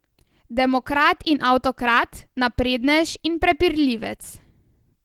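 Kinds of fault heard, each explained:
Opus compression: The speech throughout is plainly degraded in a way that points to a low-rate codec, likely Opus running in its hybrid mode, where a speech-style core handles the lower band and band-energy coding fills the top. The sound comes out hoarse and grainy rather than hollow, and content still reaches about 20.2 kHz, which fits roughly 16 kbps fullband encoding. Unlike MP3 damage, there are few swirling, watery spectral holes.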